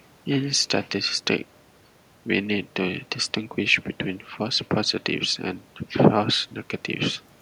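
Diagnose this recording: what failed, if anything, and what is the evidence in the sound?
Nothing stood out on listening to this speech recording that would point to a failure at any stage of the chain.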